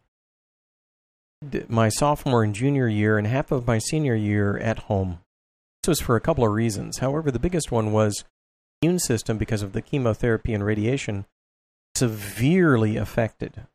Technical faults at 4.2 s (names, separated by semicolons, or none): none